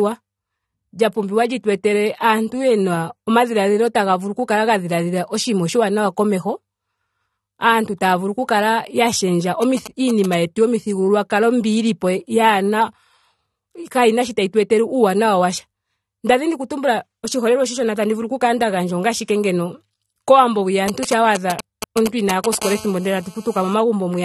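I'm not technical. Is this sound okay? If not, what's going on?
No. The speech sounds dull and smeared throughout, with nothing above about 13.5 kHz, likely from AAC compression squeezing the file to a small size.

GSM signalling bursts, a galloping pattern of short buzzes from a nearby 2G mobile phone, appear from 9.62 to 10.35 s, after "oku kala ya shendja" and before "yetu yomithigululwakalo", and again, louder, from 20.88 to 22.55 s, after "ashike ngeno kowambo hwiya".

GSM phone buzz, a steady, raspy 217 Hz hum from a nearby 2G phone on a call, follows from 22.62 to 23.74 s.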